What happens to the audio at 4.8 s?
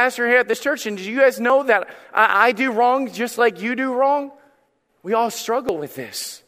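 Nothing goes wrong at 4.8 s: the speech runs on intact through that moment, with no dropout, click, distortion or other fault.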